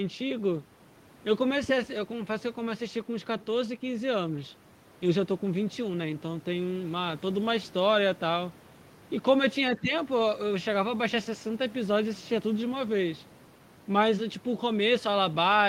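From 9.78 to 9.92 s, the speech dips briefly by a few decibels, for about a tenth of a second in all. This is likely speech suppressed in double talk. An echo canceller mistook overlapping talk for loudspeaker echo and turned the talker down.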